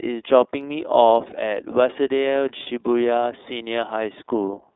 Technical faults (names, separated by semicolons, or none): iLBC codec; lost iLBC frames